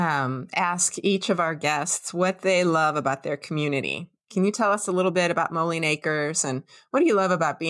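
No technical faults are audible.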